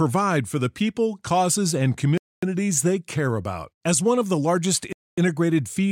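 At 2.18 s, right after "people causes and", the speech stops dead and resumes at 2.43 s with "they care about". A second identical hole runs from 4.93 to 5.18 s. This is a gap between chunks: the audio was delivered in 2.5 s pieces, and each join adds 250 ms of silence. Unlike a dropout, no speech is lost; the sentence picks up exactly where it left off, after a hard-edged, evenly spaced pause.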